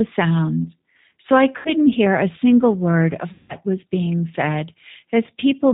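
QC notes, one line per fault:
throughout: G.729 codec damage, plainly audible. The speech is rebuilt at 8 kbit/s from a vocal tract filter, pitch predictor and sparse pulses, so nothing above 4 kHz survives and the voice sounds muffled, slightly rough and synthetic.
1.57–1.70 s and 3.33–3.53 s: VoIP packet loss concealed by the speech codec, before "hear a single word" and between "a single word of" and "was being said". About 80 ms and 160 ms of audio go missing. The decoder extends its last pitch and filter with falling gain, which makes a fading smear, and the voice stays weak briefly after packets resume.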